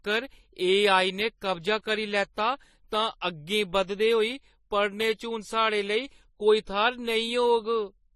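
Throughout this short speech clip two different kinds of coding artefact are layered on each other, and nothing is audible above about 13.8 kHz. That combination is likely transcoding between lossy codecs. The character fits a low-bitrate AAC-LC encode, around 32 kbit/s, later re-encoded as MP3 at roughly 48 kbit/s. The MP3 stage spends bits reproducing the earlier damage, adds its own, and keeps the lower bandwidth limit.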